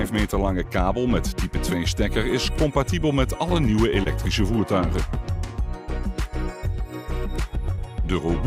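At 4.03 to 4.07 s and again at 7.76 to 7.79 s, short concealed packet loss occurs. Each time, about 20 ms of audio arrived too late, and the receiver filled the gap by extending the preceding sound before blending back, leaving a brief smear or wobble.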